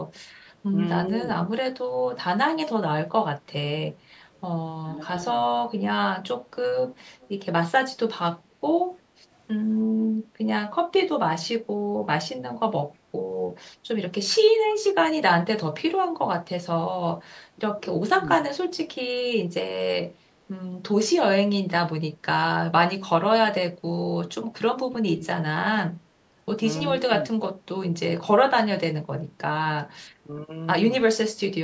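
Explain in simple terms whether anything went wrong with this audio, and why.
Yes, two things went wrong here. First, an echo leak between 4.37 and 7.29 s: a faint copy of the voice trails the original by about a third of a second (315 ms). That most likely comes from someone on the call using a loudspeaker whose echo canceller didn't fully scrub what its microphone picked back up, so that leftover sound was sent back down the line.

Second, speech suppressed in double talk, at 4.83 to 5.13 s, 9.89 to 10.28 s, 17.55 to 18.41 s, and 23.41 to 27.12 s. In those spots the voice noticeably dips or briefly drops out. The worst is the last stretch, where about a second of it is pushed down a lot. The likely reason is both sides talking at once, which confused the echo canceller into turning down the real talker along with the echo.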